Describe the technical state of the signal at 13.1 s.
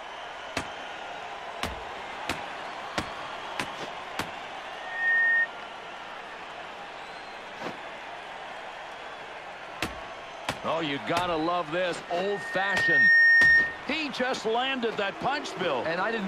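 At 13.1 s a piercing 1.8 kHz tone sits well on top of the sound, roughly 15 dB louder than the program. It is loudspeaker feedback squeal, running from 12.06 s to 13.87 s after swelling up over about a second. A microphone is picking up the loudspeaker it feeds, and at 1.8 kHz the loop gain exceeds one, so that frequency feeds on itself and grows until the amplifier limits it or the loop is broken.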